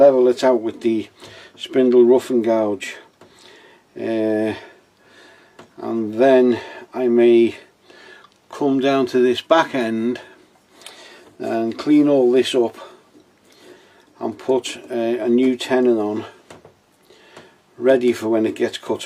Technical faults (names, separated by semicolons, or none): none